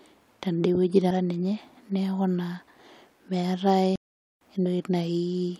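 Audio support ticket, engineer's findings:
Compressed frames skipped, 1.10 s: audio jumps forward by roughly a third of a second. The jump fits several 32 ms frames being dropped by the decoder or missing from the file. Waveform shows an abrupt envelope discontinuity. The spectrogram shows a vertical seam.

Compressed frames skipped, 4.66 s: the same signature with a smaller jump, about a tenth of a second, which points to a few 32 ms frames lost.

Playback stall, 3.96–4.41 s: output drops to silence mid-flow for 0.45 s, then resumes where it stopped. The likely cause is a player buffer underrun or a blocked audio thread. Waveform shows a flat silent gap. The spectrogram shows a blank column across all frequencies with hard edges.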